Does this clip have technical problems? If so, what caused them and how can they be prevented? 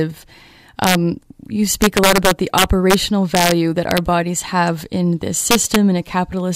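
Yes: integer overflow cracks the speech at 0.84–0.95, 1.82–2.94, 3.35–3.52, 3.91–3.98 and 5.51–5.76 s. Peaks overshot the integer limit by about 1–4 dB and wrapped to the opposite sign, giving violent cracks, not clipping's flattened distortion. Saturating arithmetic or added headroom prevents it.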